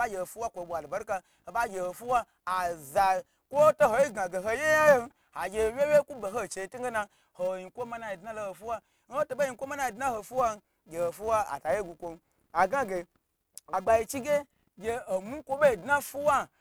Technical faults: filter restarted on every block

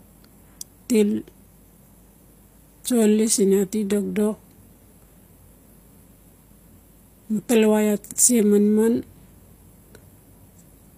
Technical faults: HE-AAC compression

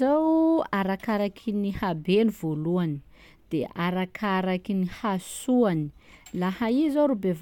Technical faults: none

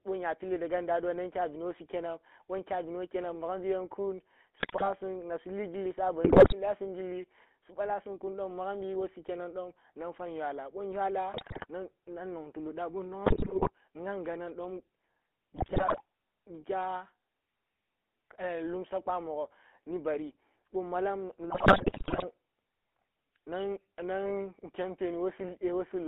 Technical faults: GSM full-rate codec; GSM bit errors

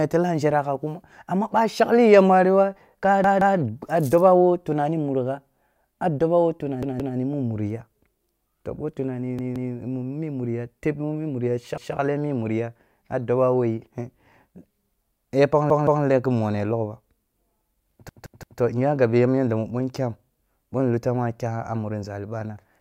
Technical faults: repeated buffer

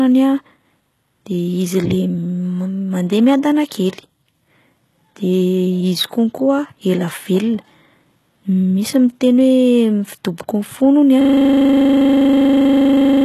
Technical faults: HE-AAC compression; system hang loop

